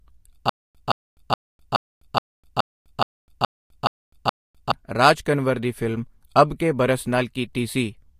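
From 0.49 to 4.72 s, a stutter with silent gaps. A 169 ms burst repeats ten times, separated by 253 ms of silence. A stalled stream likely replayed its last fragment.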